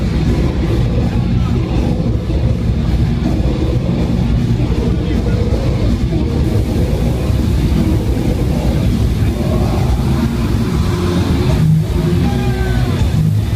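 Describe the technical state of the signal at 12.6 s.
At 12.6 s a 50 Hz buzz sits under the audio with hash above it, plus a thin whine at 15.6 kHz, about 15 dB below the signal. This is video or display buzz, running from 6.44 s to the end: a screen or video cable is coupling into the audio.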